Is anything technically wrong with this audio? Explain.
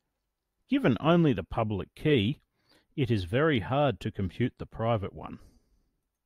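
No, nothing technically wrong turns up anywhere in this speech recording, so there's nothing to flag here.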